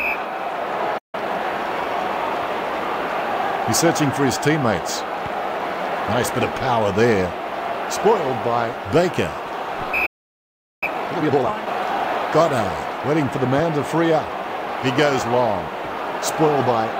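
The player likely ran dry or was blocked, causing playback stalls: the audio drops to silence at 0.98 s for about 0.15 s and at 10.06 s for about 0.76 s. Each is followed by time-compressed catch-up, with the player trimming its backlog so the audio runs hurried at normal pitch, at 1.5 times speed from 1.15 to 1.45 s and 2 times speed from 10.83 to 11.57 s.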